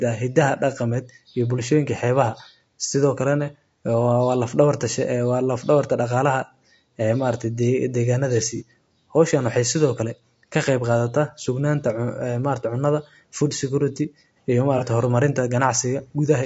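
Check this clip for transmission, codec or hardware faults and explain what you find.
Two kinds of fault are audible: codec damage throughout, and two brief dropouts that were concealed.

Throughout the speech, the low-delay AAC compression, likely AAC-ELD at a low bitrate around 32 kbps, works with short frames that resolve pitch harmonics poorly. Bits run short, so voices come out rough and grainy, with noise between harmonics and a synthetic-sounding top band.

At 8.57 to 8.62 s and again at 14.78 to 14.83 s there is AAC frame loss with concealment. Each gap fits a single lost frame of about 30 ms, which the decoder rebuilt from the previous spectrum. The result is a short smeared, noisy patch.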